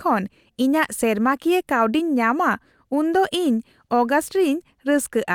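No technical faults can be heard anywhere in the recording, which holds together as a single continuous signal with nothing breaking into it.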